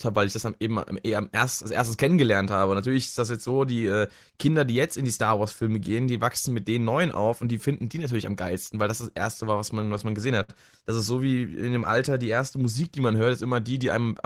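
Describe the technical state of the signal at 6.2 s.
At 6.2 s the speech signal is intact, with no audible fault at that moment.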